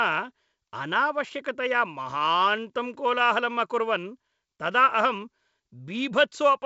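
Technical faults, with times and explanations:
Nothing stood out on listening to this speech clip.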